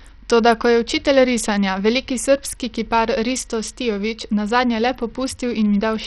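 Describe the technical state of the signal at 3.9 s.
Bluetooth SBC compression is the likely cause of the heavy damage to the speech at 3.9 s, as throughout the clip. The upper sub-bands get too few bits and flicker out while the rest is coarsely quantised, leaving dull, gritty, aliased treble, which fits a rate near 64 kbps.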